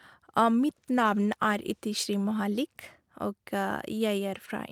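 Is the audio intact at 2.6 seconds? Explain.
Yes, at 2.6 seconds the audio is intact, with no audible fault at that moment.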